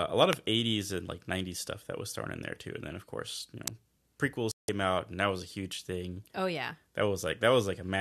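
At 0.33 s, just after "a lot", and again at 3.68 s, after "then of course you", a sharp snap sits on top of the speech. This is an electrical switching spike, likely an arc from a nearby switch or motor coupling into the line. Unlike a dropout, nothing is removed.

From 4.51 to 4.69 s the speech cuts to silence for about 168 ms before returning on "out and that was". This digital broadcast dropout, which fits roughly seven corrupted frames being muted, leaves a gap of missing audio rather than an added click.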